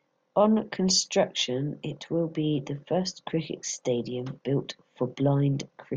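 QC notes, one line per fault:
No faults found in this speech clip. There is nothing to log against any time.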